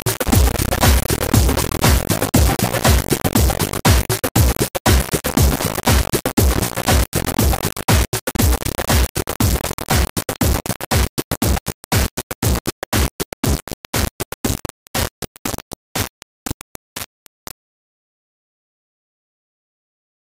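Start to finish there's heavy grainy distortion that tracks the sound, with quiet moments sputtering or dropping out. Low bit depth without dither is likely, fitting about 3 bits, with error near the signal's own level.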